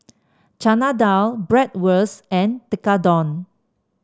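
No technical faults can be heard in this recording.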